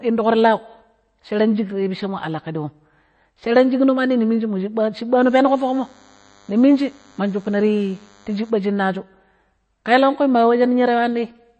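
From the start, the speech carries MP3 compression damage, and it is plainly audible. Nothing is present above 8.3 kHz, so the treble stops at a hard ceiling. The likely cause is an encoder short of bits, which fits a low bitrate around 32 kbps. It discards the highest band outright. It also zeroes weak frequency lines that flicker on and off between frames. The result is a watery, swirling texture. S sounds turn metallic, and consonant attacks smear.

From 5.21 s to 8.50 s, a DECT cordless phone buzz sits under the speech. A nearby handset or base station sends a radio burst 100 times a second. The audio circuit rectifies each burst into a click. The clicks repeat at 100 Hz. They form a thin, steady buzz rich in harmonics. It is quiet, roughly 35 dB below the speech.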